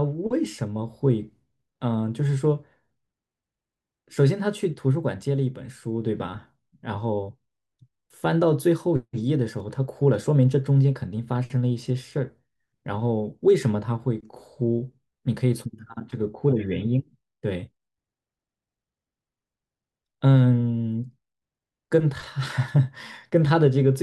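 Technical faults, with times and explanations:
No technical faults are heard in the clip.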